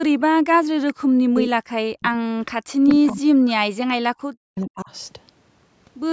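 From 0.41 to 2.05 s the speech keeps ducking, by as much as about 40 dB at its deepest, which sounds like speech suppressed in double talk: most likely the canceller couldn't tell this talker from the far-end echo while both spoke, so it pulled everything down. Inside that stretch, at 0.88 to 0.93 s, there's a brief echo leak, a faint copy arriving 432 ms late and sitting about 20 dB under the speech, likely residue an echo canceller let slip back. Two more scraps of the same 432 ms echo turn up at 2.45 to 2.51 s and 2.88 to 2.95 s. The second has suppression underway again, running from 2.54 to 4.91 s, with the same choppy dips that reach about 40 dB down in the worst spots.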